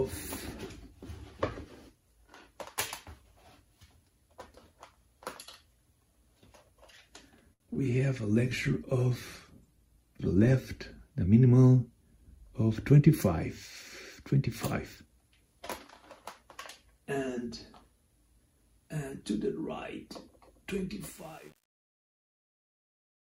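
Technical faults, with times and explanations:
7.53 to 7.62 s, short stall from a late packet: a packet arrived late and the jitter buffer emptied, so the receiver held the last sound for 67 ms, then resumed at the same point. Nothing is lost, but the sound hangs too long with a slight buzz or dip, adding 67 ms of delay.
7.66 to 7.70 s and 7.74 to 7.77 s, short concealed packet loss: twice, 20 ms of audio failed to reach the decoder in time. Each gap was filled by extending the preceding sound and blending back into real audio, heard as a brief smear or wobble right after the stall.
8.39 to 10.89 s, call bitrate drop: the bandwidth estimate fell and the encoder went from 128 kbps to 17 kbps, staying at the lowest rate for about 2.4 s. At that rate Opus codes coarsely and trims the high frequencies, so the audio turns rough and muffled until the rate recovers.
12.17 to 13.01 s, jitter buffer speed-up: excess buffered audio was trimmed by repeatedly cutting out pitch-period-length pieces, about 40 ms in total. 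Playback runs about 4% fast at unchanged pitch.
21.10 to 23.39 s, truncation distortion on a fade: the fade-out is computed at 8-bit resolution without dither, so from about 21.13 s the falling waveform collapses into coarse steps. The tail turns gritty.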